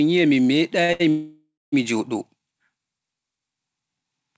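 Twice in quick succession a packet missed its playout time and the jitter buffer ran dry, giving two short stalls from a late packet in this speech. At 0.85 to 0.91 s the receiver held the last sound for about 41 ms, and at 0.93 to 1.02 s for about 70 ms, before resuming from the same point. Nothing is lost, but each spot has a briefly stretched sound with a slight buzz or dip. From 1.10 to 1.74 s comes a call audio freeze, likely caused by packets being held up in transit long enough to empty the buffer. The receiver extended the last sound for about 628 ms as a fading buzz or hiss that drops to silence for roughly the final 190 ms, then the audio picks up where it stopped. This inserts a gap without removing anything. The call codec path cuts everything above 8 kHz, which fits G.722.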